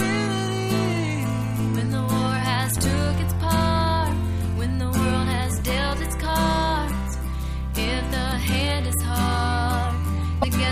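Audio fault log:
10.41–10.44 s, broken MP3 bit reservoir: a quick glitch of about 30 ms where the sound skips ahead and garbles. It's likely a cut in the MP3 stream, so the next frame, about 26 ms, pulled its borrowed bits from the wrong bytes.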